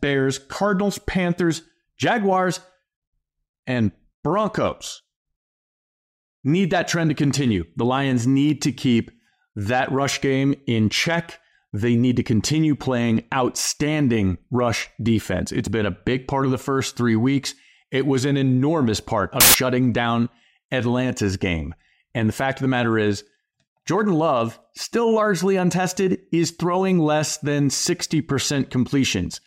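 At 19.40 s, just after "was an enormous part", samples built from the wrong bytes turn the speech into a harsh burst of loud broadband noise for about 0.14 s.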